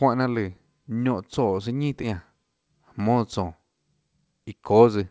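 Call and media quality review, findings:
Skip ahead, 2.03–2.12 s: speech jumps abruptly forward with no gap; about a fifth of a second of audio is gone and both sides butt together. Probable component: jitter buffer, discarding overflowed audio while later packets were already queued, cutting delay by roughly 200 ms.

Jitter buffer speed-up, 2.58–3.17 s: speech sounds hurried, running about 6% fast at unchanged pitch. Probable component: jitter buffer, repeatedly trimming short pitch-period pieces, roughly 40 ms in total, to shed excess delay built up after bunched packet arrivals.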